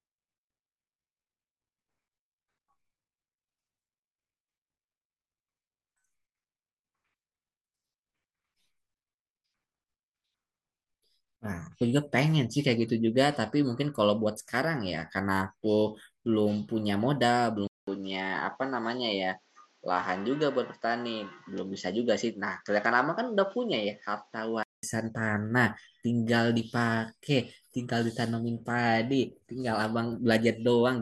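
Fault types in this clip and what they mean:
Input switched to a poorer device: at 17.67 s there's a 200 ms gap, then the speech comes back duller, with nothing above 7.6 kHz and a faint new noise floor sitting well under it, while the loudness stays about the same. At 24.83 s the full, brighter sound returns. That sudden band cut plus changed background is the likely sign of the recording hopping to a lesser microphone or headset input and back.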